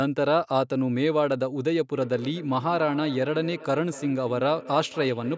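Feedback echo between two devices, 1.95 s onward: another device's playback re-enters the microphone, repeating roughly every fifth of a second, about 17 dB down.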